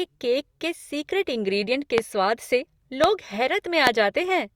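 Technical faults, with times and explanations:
1.98–2.00 s, 3.04–3.06 s and 3.87–3.89 s, loud pop: three single sharp pops, each about 20 ms long, peaking roughly 20 dB above the speech (the last closer to 25 dB). The speech continues underneath. They are likely voltage pulses from a plug, switch, static or driver glitch, shaped by the downstream circuitry into brief thumps.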